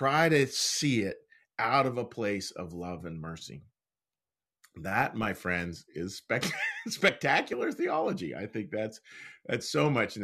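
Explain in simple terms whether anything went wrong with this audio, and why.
Nothing went wrong with this recording of speech. Listening through it, there are no glitches, dropouts or other technical faults to point to at any moment.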